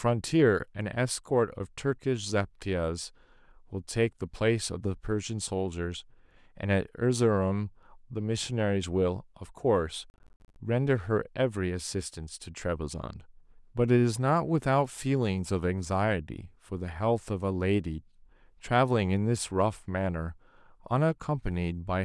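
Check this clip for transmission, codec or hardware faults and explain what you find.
One fault is present. Processor overload crackle, from 10.1 to 10.56 s: the processor falls behind and misses a run of buffer deadlines, around fifteen of them, each dropping a short stretch of silence into the speech with hard edges. The gaps are spaced in a way that suggests buffers of about 20 ms, and together they make a gritty, tearing crackle over the speech that stops once the load clears.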